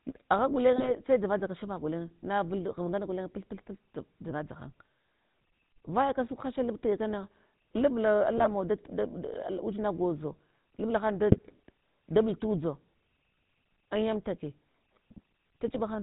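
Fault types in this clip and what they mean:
GSM full-rate codec: buzzy, gravelly roughness throughout and nothing above 4 kHz, from coarse pulse-excited vocal-tract coding consistent with a 13 kbps GSM stream.
GSM bit errors: brief squawks and gargling bursts at 0.76, 8.38, 11.32 and 15.68 s, as corrupted filter, pitch or gain values distort decoded frames.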